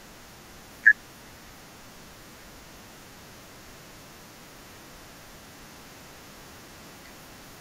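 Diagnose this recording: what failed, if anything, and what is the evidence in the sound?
An underrun with held sample occurs at 6.68 s, in the driver or buffer stage. For about 3 ms the output buffer ran dry and the converter kept its last sample value, so the speech waveform freezes flat at that value. Essentially no audio was lost: playback picks up where it paused, so the resumption is soft rather than a sharp click. That held level and gentle re-entry distinguish it from a zero-filled dropout, which clicks at both edges.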